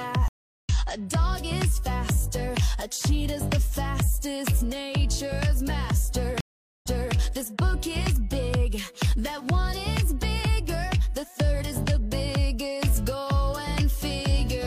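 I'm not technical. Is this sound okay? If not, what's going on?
No. At 0.28 s and again at 6.41 s the sound cuts out for under half a second. After the first gap it resumes about a third of a second further on. After the second it repeats about a third of a second. This is a stream reconnect: the connection dropped and the player rejoined the stream partway through.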